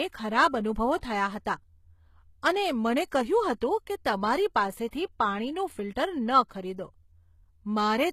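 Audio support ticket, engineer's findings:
Throughout: speech treble sounds gritty and metallic on sibilants, with harmonics misaligned above the crossover and nothing above 14.9 kHz. Likely HE-AAC compression, rebuilding the top by band replication at a rate fitting roughly 20 kbps. Unlike a plain lowpass, the treble is bright but synthetic.

0.97–1.03 s (55 ms), 4.88–4.93 s (50 ms), 6.48–6.51 s (27 ms): pre-echo. A brief hiss arrives before each attack, and the onsets are softened. Block-spread quantisation noise leaks into the quiet lead-in. It comes before the transient, unlike a reverb tail.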